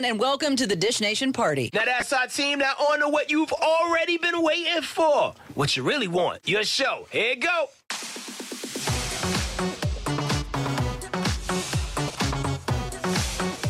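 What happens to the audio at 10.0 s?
At 10.0 s the audio is intact, with nothing out of the ordinary happening at that point.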